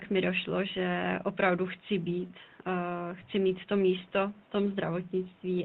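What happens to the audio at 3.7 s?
Nothing goes wrong at 3.7 s: the speech there comes through intact, with only the quiet room noise well below it and the ordinary character of the call codec.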